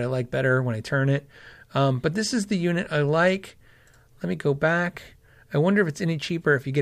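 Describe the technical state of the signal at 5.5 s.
At 5.5 s the speech signal is intact, with no audible fault at that moment.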